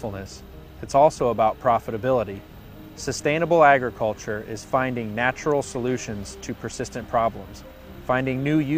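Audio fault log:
Nothing wrong turned up anywhere in the audio, so there's nothing to log here.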